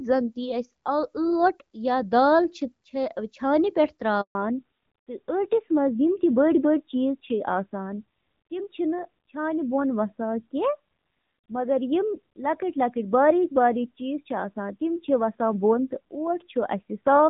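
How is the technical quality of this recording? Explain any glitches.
The call has two linked faults, both at about 4.2 seconds, and the second lasts to the end of the speech.

At 4.21 s there is a handover gap. The phone switched the call to another network, and for 140 ms no speech frames reached the receiver while the new link came up. The speech fades out within a few tens of milliseconds and then drops to silence until 4.35 s. Whatever was said inside that window is simply gone, not muffled.

From 4.35 s onward there is a fallback to narrowband. Before the handover, the HD Voice codec (AMR wideband) carried the speech with only light coding damage, at a quality that points to around 12.65 kbit/s. After the switch, the call dropped to an older narrowband codec, whose sound points to a low rate of roughly 7.4 kbit/s. All content above 4 kHz disappears, so the speech loses its crispness and sibilance and turns dull, boxy and rougher for the rest of the clip.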